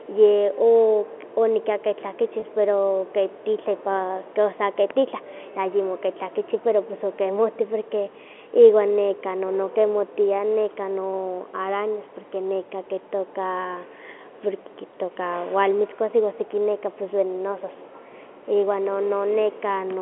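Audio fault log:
2.40–2.42 s, packet loss with pitch repetition: between "o onikaki" and "pero ke titlepa" the speech briefly holds on a slightly buzzy, static tone. Roughly 20 ms of audio, which fits a single lost packet on this G.711 telephone line, was bridged by repeating the last pitch period.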